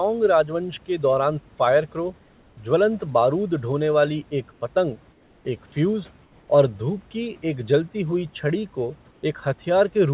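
In four brief pauses the room background flattens into a smooth, featureless hiss, slightly quieter by about 1 to 3 dB: 4.52 to 4.61 s, 5.12 to 5.45 s, 6.23 to 6.47 s and 9.11 to 9.23 s. This is comfort noise in place of the background, likely from discontinuous transmission. The sender stops sending during these gaps, and the receiver fills each one with synthetic noise roughly matched to a background sitting about 36 dB below the loudest sound.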